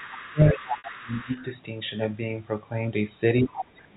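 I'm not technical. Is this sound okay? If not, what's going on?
No, there are three kinds of fault.

Other side's voice leaking through, from the start to 1.44 s: a second, fainter voice sits well under the main speech. The talker's device is playing the far end on a loudspeaker, and the microphone picks it up again. The part of the system meant to strip that echo out likely missed some of it, so the returning voice slips through, quiet.

Speech suppressed in double talk, from 0.03 to 1.33 s and again from 3.43 s to the end: the main voice dips sharply, at times almost vanishing. Both sides seem to be talking together here, and the echo remover likely couldn't tell the local talker from the loudspeaker's echo, so it turned everything down at once. The talker is pushed into the background in those stretches.

Packet loss with pitch repetition, at 0.78 to 0.84 s: a 60 ms piece of sound was lost in transit, which points to about three packets missing. 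To cover the hole, the receiver replayed the last tiny slice of the voice's pitch over and over, fading it away. You hear a brief, slightly buzzy held sound before the speech picks up again.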